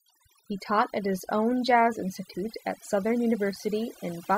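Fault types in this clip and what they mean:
Overdone noise removal: noise reduction set far too aggressively for the whole clip, gating frequency bands that sit near its noise estimate, so the background in pauses drops and breaks up into twinkling specks. Unlike low-bitrate codec swirl, the background itself drops away.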